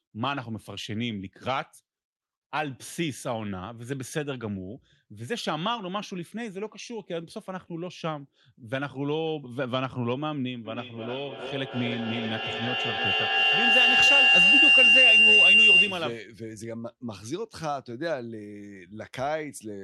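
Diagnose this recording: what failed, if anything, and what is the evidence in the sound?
Feedback howl from the acoustic loop between two devices on the call. From 10.65 s a tone near 3 kHz builds, with the loop repeating about every 300 ms and the tone peaking about 11 dB above the speech, until 16.23 s. Each loudspeaker-to-microphone trip added gain, narrowing onto that frequency.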